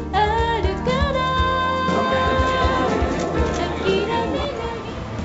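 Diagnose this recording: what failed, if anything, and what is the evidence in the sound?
Nothing has failed: the audio has passed through a call path whose content stops at 8 kHz, which fits a wideband codec such as G.722 at 64 kbps, and no dropout, glitch, distortion or other defect can be heard anywhere in the recording.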